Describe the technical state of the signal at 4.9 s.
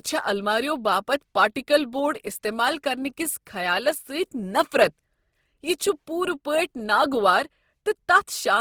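Opus compression is present at 4.9 s, as it is throughout the clip. The speech sounds rough and grainy, with a noisy texture in place of clean harmonics, yet the band stays full, with content reaching about 20.3 kHz. This likely comes from Opus in its music (CELT) mode at a low rate, around 16 kbps. The encoder keeps each band's energy but, short of bits, fills band detail with folded copies of lower bands or with noise.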